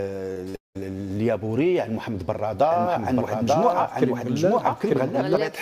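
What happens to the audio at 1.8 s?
Nothing goes wrong at 1.8 s; the audio plays through that moment intact, with no dropout, click or other fault.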